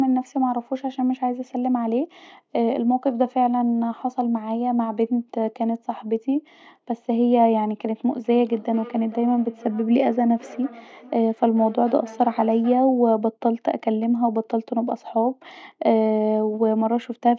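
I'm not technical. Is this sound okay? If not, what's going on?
No. From 8.2 to 13.0 s there is feedback echo between two devices: the speech comes back at a steady interval of roughly 0.4 s, unlike a room's smooth reverberation.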